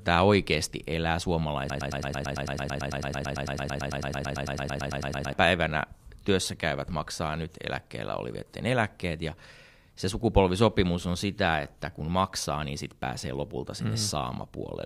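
From 1.70 to 5.33 s, a broken-record loop, likely a stall, repeats an identical 0.11 s fragment 33 times; unlike echo, nothing decays.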